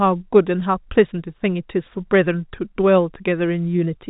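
No technical faults can be heard in the speech, which carries the narrow telephone bandwidth of G.711 mu-law coding, with nothing above 4 kHz and only a faint hiss that rises and falls with the level.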